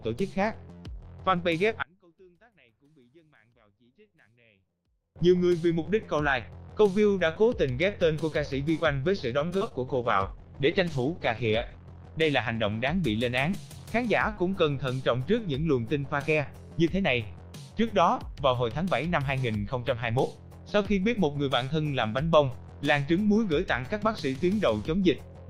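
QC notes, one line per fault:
1.83–5.16 s, one channel inverted: One stereo channel likely has its polarity reversed, so when the two channels are summed to mono, the content they share cancels. The level falls by about 33 dB across this span. Centred material and low end almost disappear, leaving only the faint difference between the channels until the polarity is restored. The effect is heard in mono playback.
9.39–9.74 s, repeated packet loss (robotic sound): Audio arrived late or went missing several times in quick succession, and each hole was patched by stretching the preceding sound forward. The longest hole is about 31 ms, and roughly a quarter of this short stretch is patched rather than real. The result is choppy, with slivers of sound missing.
9.86–14.98 s, call bitrate drop: The connection's bandwidth estimate collapsed, and the encoder was forced onto far fewer bits. What is heard fits a fall from about 48 kbps to 12 kbps, with the lowest rate holding for about 1.55 s. 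Coarser coding makes the sound rough and watery, and at the bottom of the dip the high frequencies are cut away, leaving it muffled until the rate climbs back.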